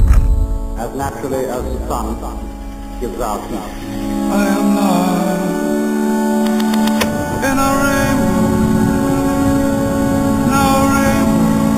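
Throughout, each sample was simply held rather than filtered, which fits an 8 kHz source raised to 48 kHz. This imaging from sample-and-hold upsampling mirrors the spectrum into 4 to 8 kHz, about 19 dB down: a bright metallic fizz tracking the sound.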